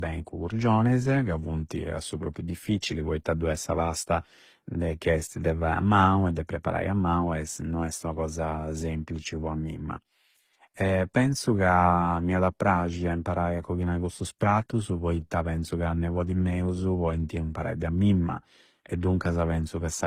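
Right through the speech there's a layered texture topping out at 19.7 kHz, likely transcoding between lossy codecs, each pass stacking artefacts.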